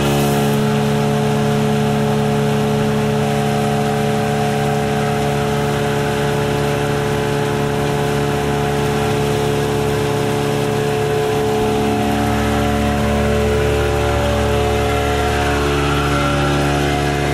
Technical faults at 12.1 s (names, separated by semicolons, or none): hard clipping